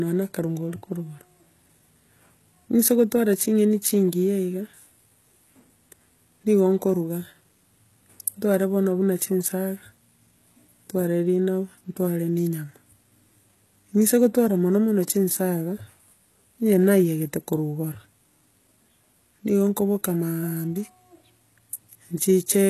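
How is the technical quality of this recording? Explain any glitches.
The recording carries clearly audible codec damage from start to finish. The sibilants come across gritty and metallic, and the top end sounds synthetic. This is most likely HE-AAC compression at a low bitrate, around 16 kbps. The codec keeps only the lower spectrum and regenerates the treble by copying lower bands upward under a coarse envelope, so the rebuilt harmonics don't align with the real ones and s sounds turn lispy. On a spectrogram, the upper band looks smeared and blocky, repeating lower patterns, with nothing at all above about 12.3 kHz.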